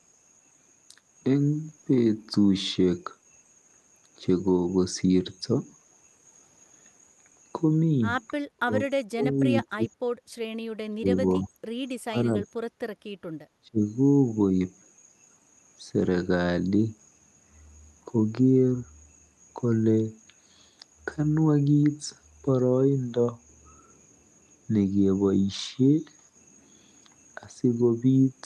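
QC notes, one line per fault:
8.57–8.73, 9.11–9.39, 9.65–9.93, 10.9–11.5, 12.07–12.59 and 13.62–13.78 s, speech suppressed in double talk: the voice keeps getting chopped down in short bursts, from a fraction of a second up to around half a second, with the deepest cuts very heavy early on and easing to a milder dip by the last one. The likely cause is the echo canceller failing to separate the near talker from loudspeaker echo while both sides talk, and ducking everything.
10.21–10.29 s, background gated by the echo canceller: the room tone drops by about 13 dB for a blink, well under a tenth of a second, then comes straight back. That's the canceller clamping the mic while far-end audio plays from the loudspeaker, then releasing, so the background briefly dips rather than fading naturally.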